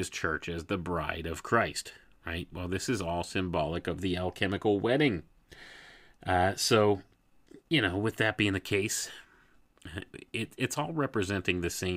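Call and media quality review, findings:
No faults found: the speech signal shows no audible technical defects at any point in the clip.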